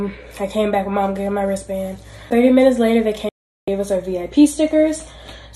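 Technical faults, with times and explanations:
3.29 to 3.68 s, digital broadcast dropout: the sound snaps to silence with a very brief fade of about 3 ms, stays completely dead for roughly 0.38 s, and then resumes at a later point, with nothing carried across the gap. The receiver stopped getting usable frames and muted its output until valid data arrived again. The length of the hole fits sixteen lost frames of 24 ms each, and whatever was broadcast during that time is simply missing.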